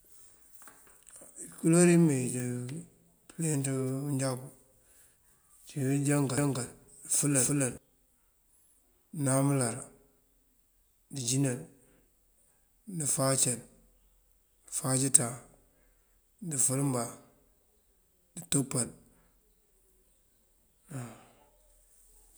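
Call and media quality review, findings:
Doubled audio track, 6.38 to 7.78 s: speech repeats about 300 ms late at roughly equal level, abrupt onset and cutoff, no decay. Likely a second, slower capture path mixed in. Spectrogram shows full-band patterns duplicated, offset horizontally.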